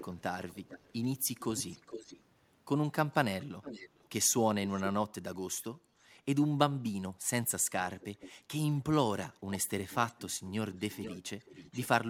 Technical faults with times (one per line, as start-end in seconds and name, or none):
0.00-1.06 echo leak
1.39-2.22 echo leak
3.12-4.08 echo leak
7.80-8.32 echo leak
9.51-11.88 echo leak